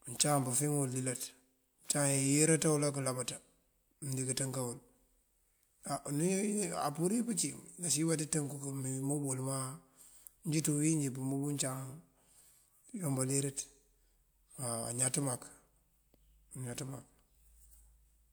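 Nothing in the speech stood out on listening.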